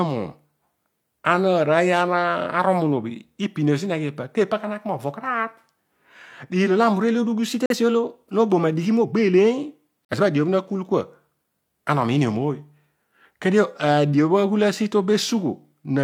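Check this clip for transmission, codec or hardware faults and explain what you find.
Two kinds of fault show up: a drift correction step and two corrupt frames that got muted.

From 7.48 to 9.04 s the speech runs about 5.5% fast and sits roughly 92 cents sharp, close to a semitone. That's likely a clock-matching resampler jumping its rate to rebalance its buffer.

At 7.66 to 7.76 s and again at 10.07 to 10.14 s the sound drops abruptly to silence. A damaged compressed frame was rejected by the decoder and replaced with silence, each gap fitting about one frame. Timing stays intact around both holes.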